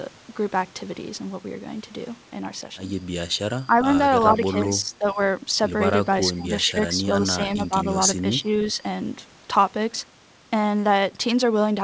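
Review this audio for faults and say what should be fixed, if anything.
Speech suppressed in double talk at 3.67, 4.33, 4.83, 6.36, 6.72, 8.17 and 8.73 s. The speech dips by roughly 5 to 15 dB, likely because the echo canceller treated overlapping talk as echo. Stronger double-talk detection in the echo canceller would prevent it.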